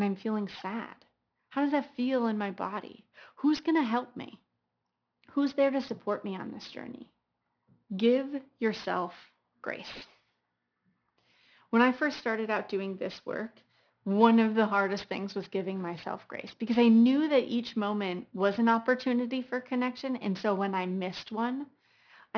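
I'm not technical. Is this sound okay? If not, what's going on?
No. The speech has aliasing from start to finish. The recording was squeezed down to a much lower quality setting without first removing the highest sounds. Those high sounds did not disappear. They folded back down as wrong, unrelated tones. Hissy sounds like s and sh come out gritty and metallic. Everything stops sharply at about 5.5 kHz, which points to a rate near 11 kHz. The false tones sit well below the voice.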